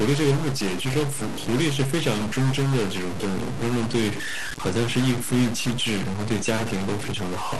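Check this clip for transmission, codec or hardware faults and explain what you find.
There are three problems here: two run the whole way through, and one is a short burst near the start.

Throughout the speech there's added distortion, and the gaps between phrases fill with a gritty noise floor instead of going quiet. That points to a stuck bit, likely one data line or converter bit held at a fixed value. About half the samples land off by that bit's weight, and the error changes with the sign of small signals near zero, so the pauses hiss.

The top end is also dull, with a gurgly, granular texture and upper bands that flicker in and out. That's the signature of MP2 compression, likely at a low rate that fits an 80 kbps stream. With so few bits to share across the 32 sub-bands, the high ones get dropped and the rest are coarsely quantised.

From about 0.81 to 1.01 s there's a burst of short noise blips over the speech. 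That's DAB burbling: a small fraction of bit errors, on the order of a tenth of a percent, slip past the error correction into the MP2 data. Corrupted samples then put short noise blips in single sub-bands, and corrupted scale factors make sub-bands jump in level for up to a frame.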